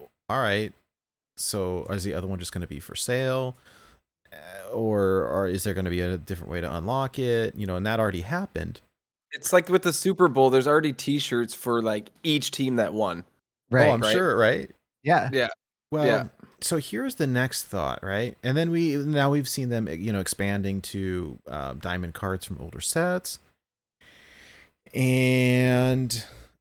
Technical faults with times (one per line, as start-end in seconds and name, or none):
none